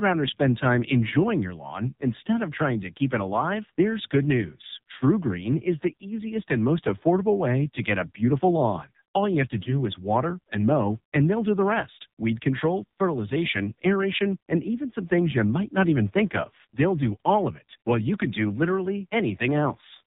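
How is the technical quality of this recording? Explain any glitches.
The quality is pretty rough: it's speech coming through a heavily squeezed phone codec, plus one brief dropout.

Throughout, you're hearing the AMR narrowband mobile codec, AMR-NB, working hard. It samples at 8 kHz, so nothing above 4 kHz survives, and it rebuilds the voice from a vocal-tract model fed by a handful of pulses every 5 ms. Here the damage is heavy, with a buzzy, synthetic edge that points to one of the low modes, around 5.9 kbps.

From 9.64 to 9.83 s, just before "is water and mow", there's a lost AMR speech frame. It sounds like a single 20 ms frame failed its check, so the decoder papered over the gap by reusing the previous pitch and vocal-tract settings at lower gain. You hear that as a quick dip or warble, then the voice coming back weak or rough for a moment.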